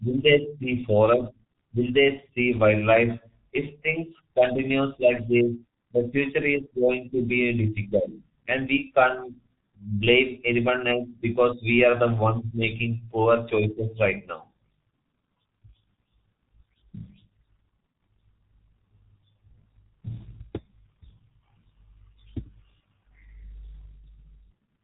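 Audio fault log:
throughout: G.723.1 codec. The speech is heavily degraded and sounds muffled and hoarse. Nothing comes through above 3.8 kHz, so sibilants and the top of consonants are gone. The codec rebuilds the voice from a coarse model in 30 ms frames and updates it slowly. That smears fast changes, so consonants blur into the vowels around them. The roughness fits a very low bitrate of about 6 kbit/s.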